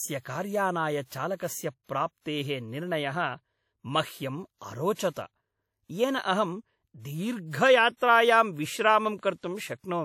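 The clip is speech carrying plainly audible codec damage throughout, with a ringing, washy quality and a hiss that rises and falls with the signal, most likely from WMA compression at a rate that fits a 48 kbps encode. The long transform blocks let quantisation noise smear across tens of milliseconds, and weak spectral lines drop out. On a spectrogram this shows as patchy, blocky fill between harmonics, missing fine detail, and a hard ceiling with nothing above 17.5 kHz. There is also a pre-echo from 4.93 to 4.99 s, where hiss spreads about 59 ms ahead of a sharp attack, leaving the onset soft and smeared. Because the noise budget for the loud attack is spread over the whole block, it fills the quiet stretch before it too. In the waveform, a low noise floor swells just before the transient instead of sitting flat, and the spectrogram shows a broadband haze leading the onset.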